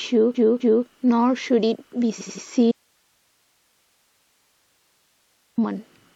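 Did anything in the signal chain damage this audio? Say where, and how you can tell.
Yes, two things. First, repeated frames in the codec or storage stage. A 256 ms block at 0.34 s plays twice more, stuttering through 0.85 s, and an 85 ms block at 2.18 s repeats three extra times through 2.43 s. The stutters and the added half-second and quarter-second give it away.

Second, an audio dropout to a faint residue from 2.72 s to 5.58 s. The signal cuts off abruptly, leaving nearly three seconds of plain hiss about 45 dB down. It's not a pause or a fade. That's likely a lost feed upstream while the path after it stayed live.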